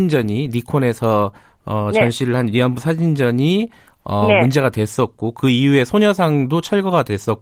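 No technical faults heard.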